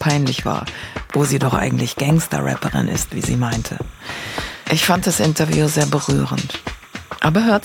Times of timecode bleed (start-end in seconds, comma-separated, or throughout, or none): 1.44-7.64